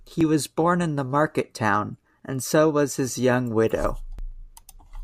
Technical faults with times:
0.21-4.19 periodic USB or driver dropouts

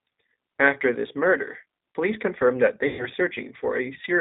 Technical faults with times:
0.00-4.20 G.729 codec
2.87-3.07 VoIP packet loss concealed by the speech codec

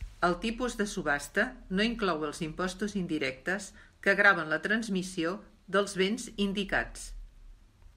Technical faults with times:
none

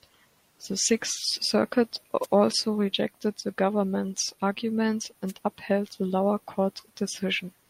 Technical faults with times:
2.22-2.26 wireless microphone noise hit
5.27-5.33 wireless microphone noise hit

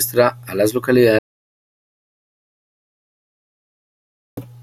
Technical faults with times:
1.19-4.37 audio dropout to silence

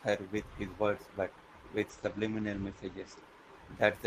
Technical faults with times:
1.91-3.27 call bitrate drop

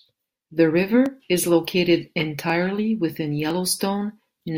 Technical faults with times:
1.06 dropped samples
2.50 dropped samples
3.50 dropped samples

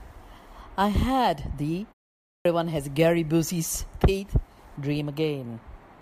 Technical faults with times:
2.24-2.45 clipped start after a pause

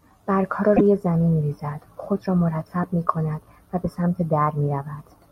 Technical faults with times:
0.76-0.81 broken MP3 bit reservoir

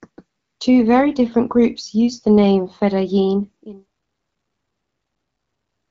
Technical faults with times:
none

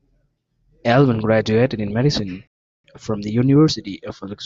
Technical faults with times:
2.47-2.84 rebuffering stall

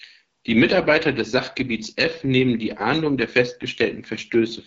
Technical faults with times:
0.00-4.66 AMR wideband (HD Voice) codec

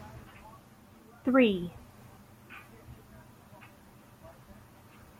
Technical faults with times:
none

